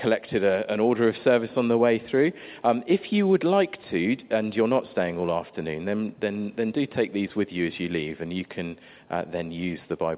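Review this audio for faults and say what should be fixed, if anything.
No faults found; nothing here needs fixing.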